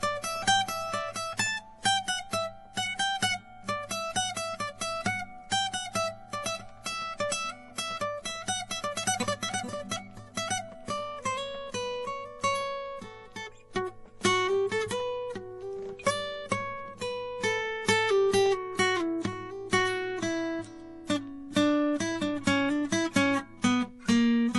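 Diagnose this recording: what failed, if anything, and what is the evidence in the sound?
The codec stage likely suffered transcoding between lossy codecs, MP3 then Vorbis. Throughout, the music stops above 11.5 kHz, with layered smearing that fits two low bitrates.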